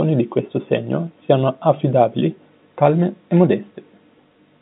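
No technical faults are audible.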